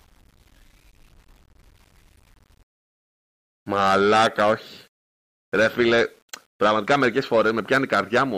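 From start to finish the audio carries a grainy, gritty distortion that rises and falls with the signal. This points to low bit depth without dither, likely from rounding to 8 bits. The resulting error sits roughly 40 dB below the signal and tracks it closely.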